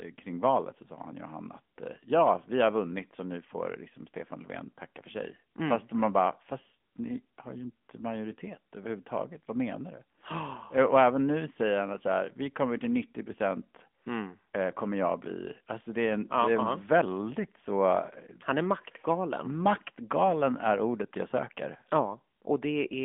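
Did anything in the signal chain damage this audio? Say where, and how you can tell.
Yes. The damage is at the codec stage and runs through the whole clip. This is the AMR narrowband mobile codec. Nothing survives above about 3.7 kHz, and the speech sits in a telephone band of roughly 200 Hz to 3.5 kHz. The codec damage is plainly audible as a buzzy, synthetic edge. The speech is rebuilt from a vocal-tract model driven by sparse pulses per frame. The degree of artefacting fits a mid-range rate near 10.2 kbps.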